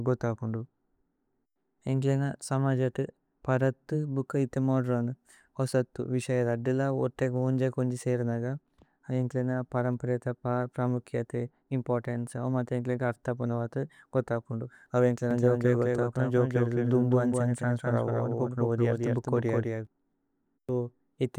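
A doubled audio track runs from 15.31 to 19.87 s, right after "ഗോഥ അപുന്ദു അവ": a second, full-band copy of the speech trails about 200 ms behind, roughly 5 dB quieter, with no room decay, and switches on and off abruptly, likely from a slower duplicate capture path.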